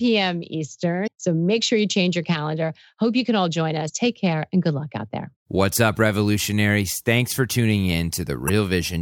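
Damaged data in a compressed stream at 1.03–1.08 s, 3.85–3.90 s (between "you can all join" and "take care and good") and 8.47–8.50 s: corrupted frames make the decoder lose sync, producing brief glitches.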